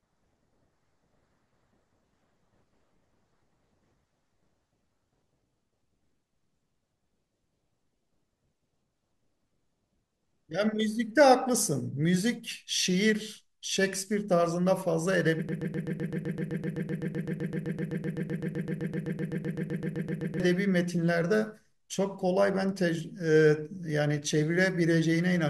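From 15.49 s to 20.40 s the speech locks into a broken-record loop: a 128 ms fragment repeats exactly, back to back, dozens of times, likely because playback stalled and resent its last buffer. Unlike a stutter, nothing advances, and the speech from those seconds is lost.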